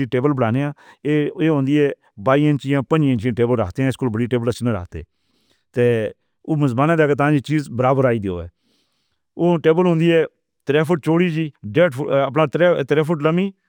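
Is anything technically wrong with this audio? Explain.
Yes. Imaging from linear upsampling runs through the whole speech clip. The rate was raised by straight-line interpolation, which fits a doubling from 24 kHz to 48 kHz. A faint mirrored spectrum sits from 12 kHz to 24 kHz, roughly 45 dB down, adding a light metallic shimmer to sibilants.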